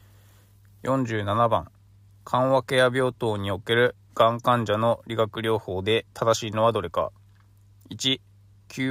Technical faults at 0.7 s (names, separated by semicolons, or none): none